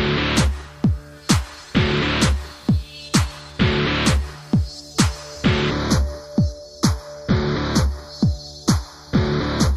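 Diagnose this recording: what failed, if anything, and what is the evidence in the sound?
From 5.71 s to 9.76 s the sound turns hollow and phasey: channel delay causing comb filtering at the driver or buffer stage, one channel running about 0.2 ms late before a mono sum. Fixed, evenly spaced notches starting near 3 kHz distinguish it from a codec's smooth high-frequency roll-off.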